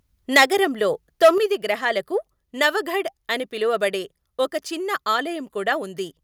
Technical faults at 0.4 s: microphone overload; microphone volume stepped down

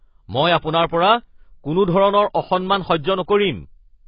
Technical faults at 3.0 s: AAC compression

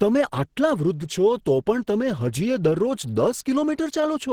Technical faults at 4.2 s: Opus compression

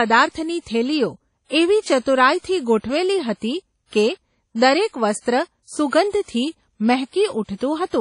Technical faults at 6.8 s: low-bitrate audio saved at a high bitrate

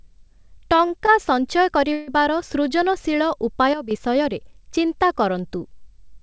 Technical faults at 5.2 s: none

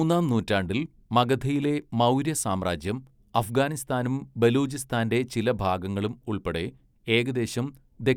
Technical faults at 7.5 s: none

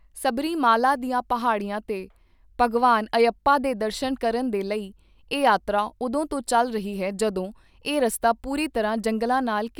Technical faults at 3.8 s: none

